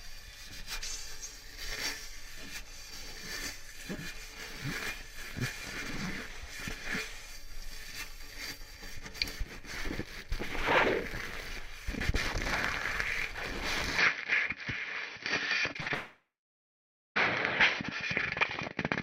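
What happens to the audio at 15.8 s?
At 15.8 s two faults overlap. From 13.99 s to the end at 19.02 s, the system most likely switched its input to a poorer device. The new path passes nothing above 6 kHz, so the sound turns duller and narrower from that moment. The level shifts by around 5 dB, and a new background noise sits roughly 40 dB below the signal. There is no silence at the switch itself.

Inside that stretch, from 15.73 s to 15.92 s, repeated packet loss (robotic sound) occurs. Four gaps open in quick succession, the longest lasting 54 ms. The receiver patches each hole by extending the last sound, filling 104 ms of the 120 ms that went missing, so 56% of this span is concealed audio rather than the original. The result is choppy, with pieces of the sound dropped out.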